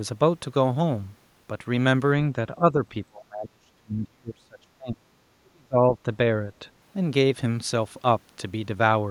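From 2.57 to 5.19 s, and again from 5.41 to 6.09 s, the speech sinks, thins and breaks into fragments, dropping by as much as about 35 dB. This is speech suppressed in double talk: an echo canceller likely mistook the talker for loudspeaker echo while the far side spoke, and attenuated both. On a waveform the envelope collapses in patches, and a spectrogram shows the harmonics fading or vanishing in gaps across both spans.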